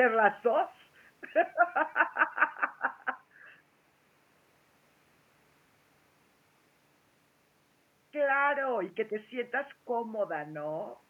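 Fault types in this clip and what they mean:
No technical fault is present in the signal, and the only thing beneath the speech is the room's own ambient noise, sitting about 41 dB lower.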